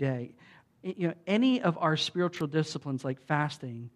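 Right after "know any of our", at about 2.37 to 2.41 s, there's an electrical switching spike, a sharp little snap of tightly bunched clicks sitting on top of the speech. It peaks around -25 dBFS, so it's not huge. It's likely a nearby switch, motor or static discharge arcing briefly, with the audio line picking up those bursts as added energy.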